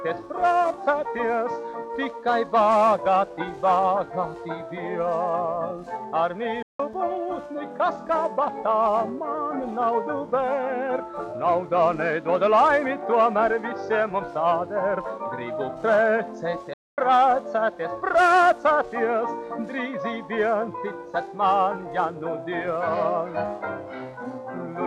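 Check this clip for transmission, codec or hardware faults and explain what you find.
Two playback stalls break the clip, at 6.62 to 6.80 s (about 170 ms) and 16.73 to 16.98 s (about 240 ms). The output goes silent mid-flow, likely because the player ran short of data or its thread was held up, then resumes. Each gap lasts far longer than a momentary dropout or click.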